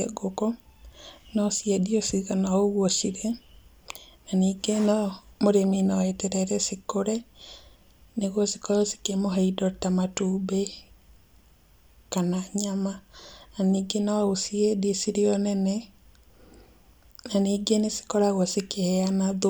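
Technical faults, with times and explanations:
No technical faults detected in this speech recording.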